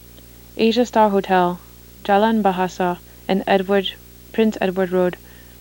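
From start to finish, a video or display buzz sits under the speech. A screen or its video cable is coupling into the audio path. The buzz repeats at 59.94 Hz, the picture's field rate. Rough hash rides on top of it. A thin, very high whine at 15.7 kHz is also present, which is the line rate of the picture scanning. The interference sits well below the speech, about 25 dB down.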